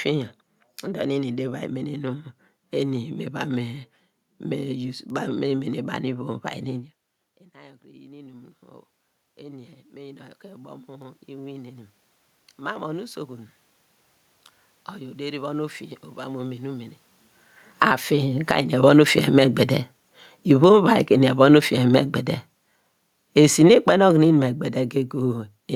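From 6.22 s to 21.05 s an automatic gain rise follows a drop of about 24 dB in the input level, lifting gain by about 11 dB over many seconds. Unlike the talker moving back around 7 s, the room noise swells along with the voice.

From 17.66 s to 25.45 s, as the talker comes closer around 17 s, an automatic gain fall takes the gain down by about 13 dB. The loud passage sinks slowly, and the background noise drops with it. A talker moving would leave the room noise steady.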